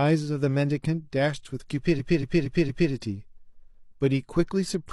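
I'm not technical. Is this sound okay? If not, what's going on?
No. Between 1.95 and 2.88 s there are repeated frames: a chunk of about 0.23 s of speech plays again four extra times, like a stutter. The same compressed piece was stored or sent more than once, adding about 0.93 s.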